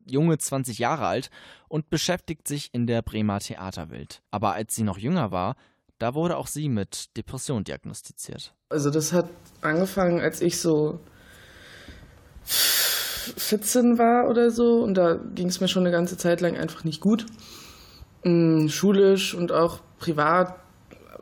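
Nothing stood out on listening to this audio.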